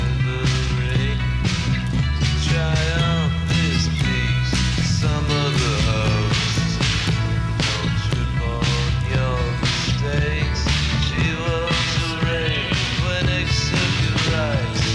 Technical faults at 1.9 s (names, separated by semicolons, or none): none